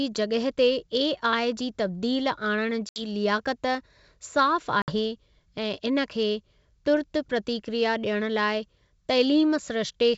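At 2.89 s, just after "जी तब्दील आणण", and again at 4.82 s, packet loss on an ADPCM call cuts hard-edged silent gaps of about 70 and 60 ms. Unlike a plain dropout, the speech returns slightly distorted while the G.722 decoder's predictor resynchronises.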